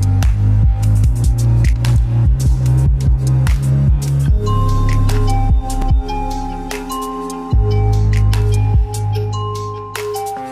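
A single sharp click at 5.82 s interrupts the audio. It is a repeated buffer fault: new audio failed to arrive in time, so the playback device played its last block, about 5 ms long, one more time. Such a brief repeat is heard as a tick rather than a stutter, with hard joins at each end of the duplicate. Roughly 5 ms of the true audio is displaced at that point.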